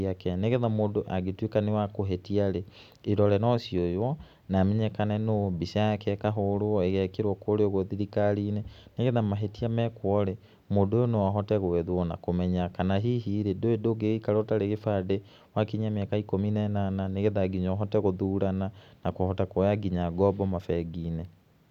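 No technical faults can be heard anywhere in the speech; the signal stays continuous and intact throughout.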